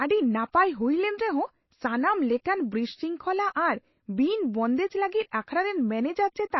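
From start to finish the speech sounds watery and swirly, with nothing above 5.8 kHz. The likely cause is MP3 compression starved of bits, which fits a 24 kbps stream.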